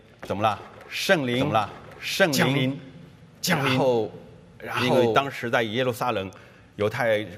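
A doubled audio track runs from 1.33 s to 5.29 s: a second, full-band copy of the audio trails about a second behind at roughly equal loudness, with no decay or room colour, cutting in and out abruptly, likely from an out-of-step duplicate capture path.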